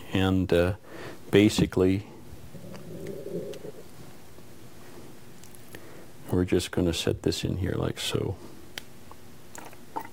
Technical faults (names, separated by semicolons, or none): crude rate conversion